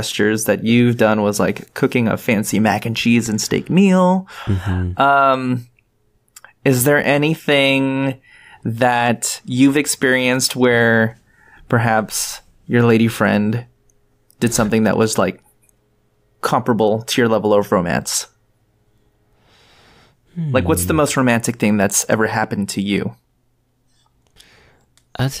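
Nothing in this recording trips up the ear, and there's no fault to point to anywhere along the way.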